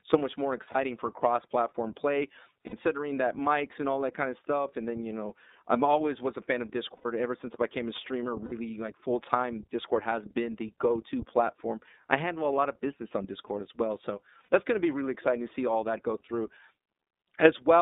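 The whole clip carries the iLBC codec, and you can hear it plainly. The speech is squeezed into a band from about 250 Hz to 3.7 kHz, and it has that slightly rough, synthetic edge iLBC gives voice. Each chunk of excitation is coded on its own with no help from earlier frames, and the grain here fits the 30 ms frame mode at around 13 kbps.

Then there are five spots of lost iLBC frames. At 0.71 s, right after "so much more" and before "for cross platform play", about 30 ms drops out. Further dropouts come at 2.66 s (60 ms), at 6.96 s (90 ms, after "was a fan of" and before "ever since I became"), at 8.45 s (60 ms), and at 14.42 s (60 ms, just before "that's going to be"). Each time the decoder fills the hole by repeating the last pitch cycle with some noise mixed in, so you get a brief held, buzzy vowel. The 90 ms one is the longest. Because the frames stand alone, the voice snaps back almost immediately afterwards.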